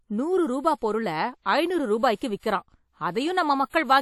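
A speech clip with plainly audible transform-codec damage throughout. It sounds washy and ringing, with a hiss that rises and falls with the voice. That points to WMA compression as the likely cause, at a rate that fits about 48 kbps. Content extends to about 20.1 kHz. At 2.16 s there is pre-echo. A short hiss runs for about 49 ms, to 2.21 s, ahead of a sharp onset. The codec spread its noise across the whole block, so the quiet gap before the attack filled up and the attack itself sounds smeared.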